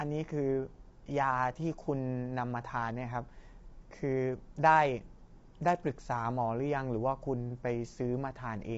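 This is a speech clip. Coding damage runs through the whole clip and is plainly audible. The voice sounds rough and grainy. Noise fills the gaps between the pitch harmonics. Nothing is heard above about 7.8 kHz, so the top band is cut away. This is likely low-delay AAC compression, as used for video calls. Its short frames resolve pitch harmonics poorly. The damage level fits a bitrate around 24 kbps.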